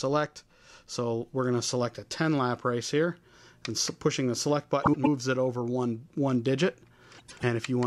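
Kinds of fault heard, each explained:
frames out of order: A brief garbled flutter at 4.83 to 5.07 s and again at 7.18 to 7.44 s. Each stretch plays with its two halves swapped. Two neighbouring blocks of 104.5 ms each arrived in reversed order and were decoded as they came, which fits runs of four coded frames. The audio jumps at three seams in each stretch, yet the total duration stays intact.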